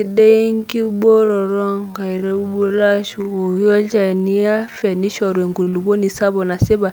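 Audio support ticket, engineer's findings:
Time-stretched section, 0 to 4.84 s: speech dragged to half speed, pitch unchanged. Likely a stretch step repeating short chunks to pad length.

Short stall from a late packet, 5.63 to 5.68 s: last sound held about 39 ms, slight buzz or dip. Jitter buffer ran dry, nothing lost, delay up 39 ms.

Short concealed packet loss, 5.69 to 5.73 s: brief smear or wobble right after the stall. About 40 ms never arrived, patched by extending the prior sound, then blended back.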